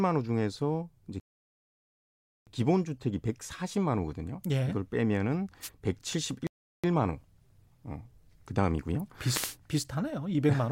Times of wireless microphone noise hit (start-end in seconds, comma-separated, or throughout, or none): 5.61-5.69, 9.28-9.56